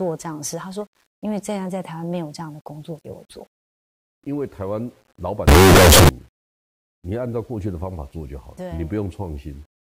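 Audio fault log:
5.48–6.09 s, signed and unsigned mixed up: speech becomes loud, harsh distortion, quiet parts as loud as peaks; likely 8-bit samples read with the top bit flipped.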